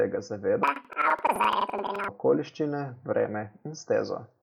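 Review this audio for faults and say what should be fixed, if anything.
Planar audio read as interleaved, from 0.63 to 2.16 s: the speech jumps an octave (12 semitones) higher and flutters at about 11.7 Hz. Each 85.33 ms block, which fits a 4096-sample block of separate left and right runs, is being read as alternating left-right pairs. So every block plays twice at double speed, left half then right half, which keeps the overall pace intact while raising the pitch. To prevent it, match the reader's channel layout flag to the buffer's actual planar format, or convert to interleaved before playback.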